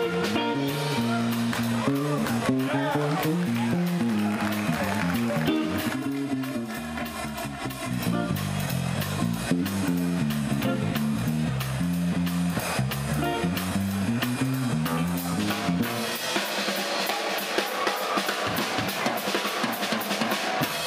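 From 5.93 to 7.91 s the audio turns hollow and phasey, with a fixed notched coloration. This is channel delay (comb filtering): one channel arrives about 3 ms late, and summing to mono cancels evenly spaced frequencies, the first notch sitting around 150 Hz.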